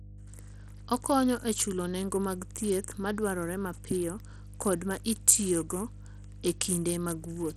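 A steady mains hum runs under the speech from start to finish. It sits at 50 Hz, roughly 15 dB below the speech, so it is clearly heard. A ground loop or nearby transformer is letting the power line leak into the signal.

The whole clip also carries plainly audible coding damage. The treble is thin and flickers, and a gritty noise clings to the speech. This sounds like Bluetooth SBC compression, likely at a small bit pool, which fits a bitrate near 80 kbps.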